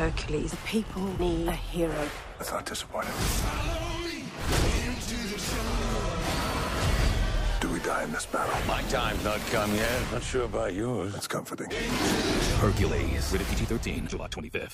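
No technical faults can be heard anywhere in the recording; the signal stays intact and continuous throughout.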